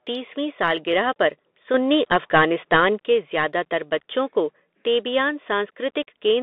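Bluetooth CVSD headset codec throughout: the band is held between 250 Hz and 3.6 kHz, with scratchy sibilants and granular hiss, which fits one-bit delta coding at 64 kbps.

Sudden gain jump from 1.74 to 2.98 s, just after "सालगिरह पर" and until "के ज़्यादातर": speech and background noise rise together by about 6 dB, likely an unramped digital gain step.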